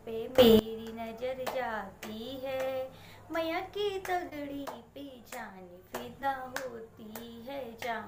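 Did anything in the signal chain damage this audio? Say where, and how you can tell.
Yes. Two sudden gain jumps sit in the level handling, likely a gain setting applied without a ramp. From 0.38 to 0.59 s the level leaps up by about 20 dB. From 4.66 to 5.92 s it drops by about 6 dB. Background noise steps with the sound.

Short concealed packet loss comes from the network stage. It occurs at 1.32 s, 4.29 to 4.32 s and 6.22 s. Each time about 10 ms of audio never arrived. The decoder continued the last sound to fill the hole. At 4.29 s that fill is longest, a brief smear.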